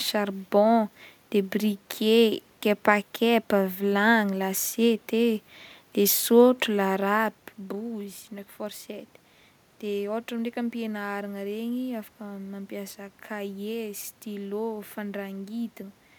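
Speech recording with no technical faults; the background is room noise captured at the microphone, and the level shift around seven seconds is the talker moving relative to the mic, not the signal chain.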